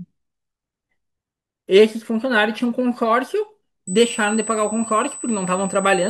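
From about 3.87 s through to the end, a steady, fixed-pitch whine sits at 8 kHz, a classic USB whine. That pitch matches the bus's 125 microsecond microframes: each burst of current draw leaks into the audio through the power or ground line and repeats 8,000 times a second. It's roughly 15 dB below the speech, a thin, high tone riding under everything.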